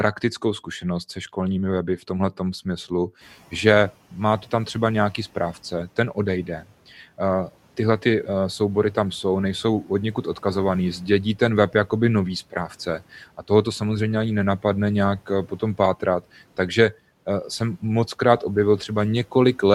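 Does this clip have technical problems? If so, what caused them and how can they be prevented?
Yes. Between 12.52 and 13.02 s, just after "ten web jakoby nový" and before "a toho to samozřejmě", the noise suppressor mistook part of the speech for background and pulled it down along with the room noise. That cut the speech by up to about 8 dB over roughly a tenth of a second, so that stretch sounds swallowed and faint. To prevent this, make the suppression less aggressive or give it a slower release so that quiet speech isn't classed as noise.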